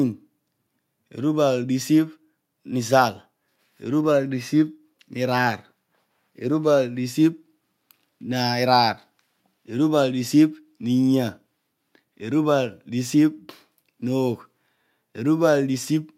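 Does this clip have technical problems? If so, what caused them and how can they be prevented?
No, there are no technical faults to trace or prevent in this recording.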